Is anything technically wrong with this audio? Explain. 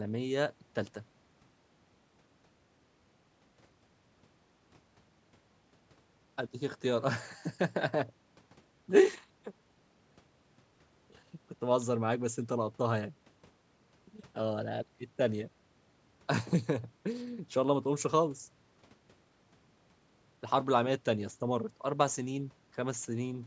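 No, nothing stood out on listening to this speech, which has passed through ordinary call microphone processing that trims the lowest bass and carries nothing above 8 kHz.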